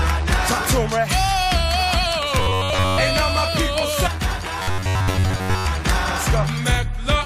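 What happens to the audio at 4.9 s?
At 4.9 s the audio is inside a stretch of robotic sound from repeated short buffers, running from 4.6 to 5.66 s. It turns into a rigid, metallic buzz at 93.8 Hz. That rate fits a buffer of about 10.7 ms. New audio likely arrives too seldom, so that short slice is played again and again while the real signal is skipped. Roughly 70 percent of the stretch is repetition.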